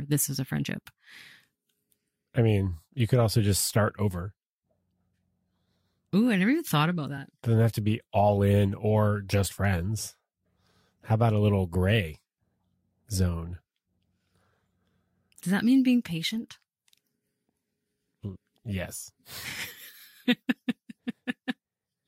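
Right after "this as a", at about 0.66 s, the audio jumps forward by roughly a single compressed frame, somewhere around 20 ms, and it happens again at about 20.65 s. These are compressed frames skipped: the frame was missing or rejected by the decoder, so playback leaps ahead.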